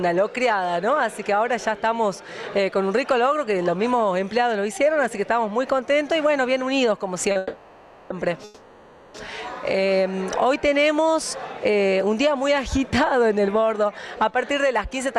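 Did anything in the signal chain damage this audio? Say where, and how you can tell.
Yes, and it's all on the network and jitter buffer side. First, there's a short stall from a late packet at 7.31 to 7.37 s. The sound just before it gets held about 40 ms too long, with a faint buzzy sustain, and then carries on from exactly where it left off. The packet missed its slot, the buffer ran dry, and the receiver stretched what it had until the packet showed up. Nothing is lost, but playback now sits about 40 ms later.

Right after that come two call audio freezes, from 7.37 to 8.12 s and from 8.44 to 9.16 s, about 730 ms and 700 ms long. In each one the last sound keeps going as a decaying buzz that never drops to true silence, and then the audio resumes from the same point. The likely cause is packets stuck in transit that left the jitter buffer empty, so the receiver padded the gap with concealment. 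Nothing is missing, but nearly 1.5 s of delay has piled up.

At the end, from 13.33 to 15.15 s, there's a jitter buffer speed-up. The audio runs at about 108% speed while the pitch stays put, so it sounds a bit hurried. The buffer was holding more than its target after the backlog arrived, so the receiver cut out many tiny pitch-period slices in a row, around 150 ms in total, to pull the delay back down.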